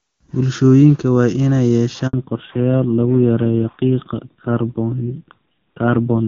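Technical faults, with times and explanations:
2.07 to 2.13 s, handover gap: the speech cuts out within a few tens of milliseconds and stays silent for 60 ms while the call switches networks and no speech frames arrive. Unlike a packet-loss concealment glitch, nothing is filled in. It is a clean hole, and what it covered is gone.
2.13 s to the end, fallback to narrowband: after the gap, everything above 4 kHz is missing and the speech turns dull and rough. Before the switch, HD Voice at 23.85 kbit/s had sounded clear. This is a lasting codec change, which sounds like the drop to a low-rate narrowband codec around 5.9 kbit/s, not a passing filter or dropout.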